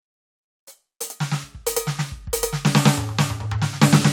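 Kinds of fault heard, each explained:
Nothing here stands out as a fault; the music just carries on as it should with nothing getting in its way.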